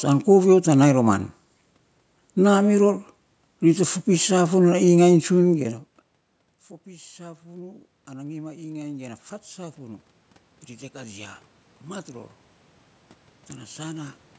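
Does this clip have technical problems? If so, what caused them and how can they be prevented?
Yes. From 6.84 to 10.09 s there is automatic gain rising. The input fell by about 24 dB, and the control raised its gain by about 6 dB, so voice and room noise swell together. The waveform envelope ramps up slowly, and a spectrogram shows the noise floor brightening. A steady microphone distance or a fixed gain setting prevents this.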